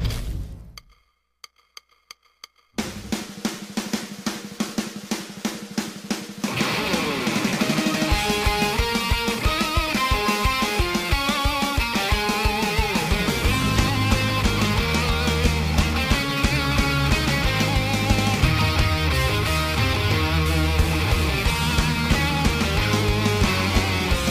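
The converter's sampling clock is wandering, which is sample clock jitter present from start to finish: each sample lands early or late at random, by something on the order of ten microseconds rms. Because a timing slip costs more where the waveform moves fastest, the error follows the sound, sitting only around 20 dB below the audio. It comes through as a grainy hiss that swells on loud, bright passages and drops away entirely in the quiet gaps.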